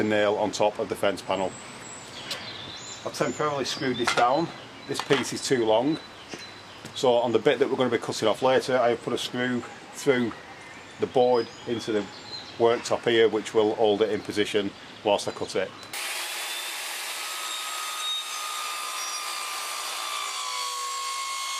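Nothing in this audio stands out as a technical problem, so there's simply nothing to point to here.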